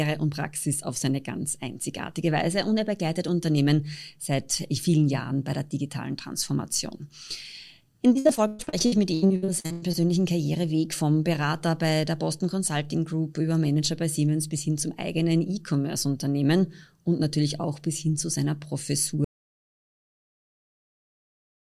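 From 8.13 to 9.95 s the audio turns choppy: repeated packet loss, with holes up to 117 ms patched by stretching the preceding sound, so nearly half the stretch is concealment. Unlike a dropout, gaps are filled rather than silent.

At 19.25 s the audio dropout to silence begins and lasts to the end: silence, with no room tone. Unlike concealed packet loss, nothing is patched, which points to the input likely being lost while recording continued.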